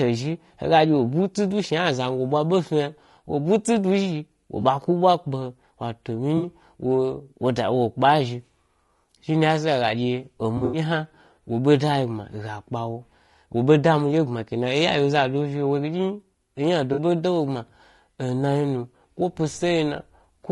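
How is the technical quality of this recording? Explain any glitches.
The recording has audible coding damage throughout and five short dropouts. Low-delay AAC compression runs from start to end: the speech is rough and grainy with a dulled top band, likely from AAC-ELD's short frames starving harmonics at about 32 kbps. AAC frame loss with concealment occurs at 4.61 s (20 ms, after "zhi wo"), 6.37–6.47 s, 8.45–8.49 s, 10.57–10.79 s (scattered, longest run about 70 ms) and 16.93–16.99 s. In each gap the decoder reuses the last good spectrum, leaving brief smeared, phasey patches.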